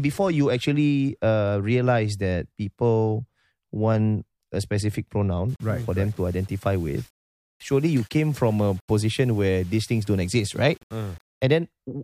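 From 5.49 s, after "want a specific", to 11.43 s, the speech turns gritty: low bit depth without dither, likely rounding to about 7 bits. Signal-following error sits around 30 dB down, so quiet tails sputter. The waveform shows stair-steps; the spectrogram shows haze that comes and goes with the sound.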